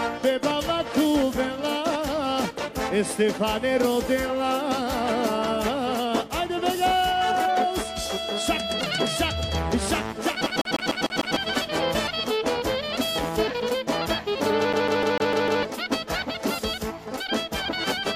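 At 10.46 s the audio locks into a CD stuck on one turn. A 150 ms slice repeats six times, with a brief mute at each jump, until 11.36 s. A scratch keeps throwing the laser back one track. The same even stutter returns from 14.73 to 15.63 s.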